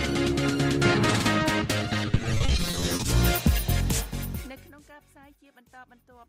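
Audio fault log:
2.11–3.08 s, repeated packet loss (robotic sound): The audio turns choppy here. Short holes keep appearing, each no longer than about 30 ms, and they come in quick succession. Every hole is covered by stretching the sound just before it. That patching adds up to about 480 ms, roughly half of this stretch. The pattern fits dozens of lost or late packets. Because each repeat loops the same brief slice, the sound is left choppy, with pieces missing.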